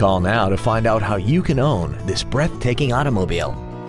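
From 2.75 s to the end at 3.89 s, the samples are played back faster than they were captured, with no rate conversion, a wrong sample rate fault. The speed-up of 1.09 times fits material recorded at 22 kHz being played at 24 kHz. Because timing and pitch are tied together, that last stretch of audio runs about 9 percent quicker and sits 1.47 semitones higher, so it sounds brighter and more hurried than the part before it.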